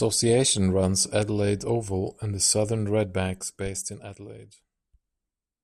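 A level change applied in coarse, unsmoothed steps causes zipper noise in this speech recording from 2.94 to 4.48 s. As the level drops by about 15 dB, each of roughly 50 steps per second leaves a tiny click, heard as fast ticking on the voice.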